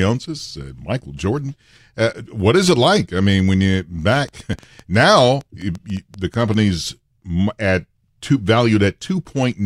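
From 3.39 s to 6.55 s, just after "is it like I", a train of clicks sits over the speech. About twenty pops arrive at an uneven pace, near 6.7 per second. They are roughly as loud as the speech. Interference from nearby equipment is the likely cause.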